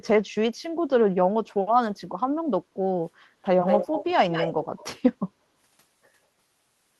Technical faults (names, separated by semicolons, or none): echo leak